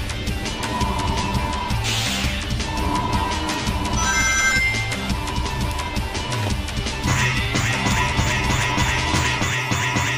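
At 7.06 s the audio has compressed frames skipped: roughly one frame's worth, about 20 ms, is never played, consistent with a single 23.2 ms codec frame lost or rejected by the decoder.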